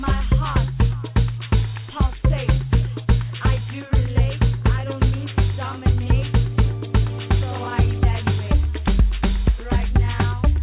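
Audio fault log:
No technical faults can be heard anywhere in the signal.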